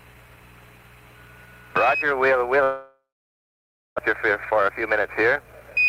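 A long network dropout, likely from packets that stopped arriving, runs from 2.63 to 4.00 s: the last sound fades as a buzz or hiss into silence, and about 0.92 s of audio never returns. From 4.10 s to the end, a jitter buffer speed-up trims short pitch-period slices to shed about a fifth of a second of backlog, so the audio runs 9% faster and sounds hurried at unchanged pitch.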